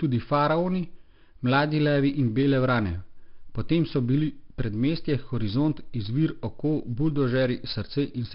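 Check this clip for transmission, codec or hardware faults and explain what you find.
One codec fault runs the whole length of this speech clip. Gritty, level-following hiss rides every loud syllable, attacks crunch, and nothing sounds above 5.3 kHz. That is heavy 4-bit ADPCM compression: coarse prediction steps lag sharp changes, and the rate suggests around 44 kbps at a low sample rate.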